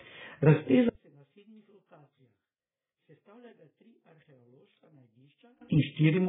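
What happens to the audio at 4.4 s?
At 4.4 s the speech has almost disappeared. That's inside a stretch from 0.89 s to 5.61 s where it drops by about 35 dB, which points to one channel inverted: one side's polarity is most likely flipped, so when left and right are summed to mono, the centred voice cancels itself out. What's left is a faint residue of whatever differed between the channels, not the full voice.

Under that, and through the whole clip, you can hear AAC compression damage. The audio is dull and smeared, with nothing above 3.7 kHz, and sibilants and sustained sounds have a warbly, fizzy texture. The likely culprit is AAC-LC at a very low bitrate, around 8 kbps. At that rate the encoder throws away the top end and coarsely quantises what remains, leaving those holes and that swirly smear.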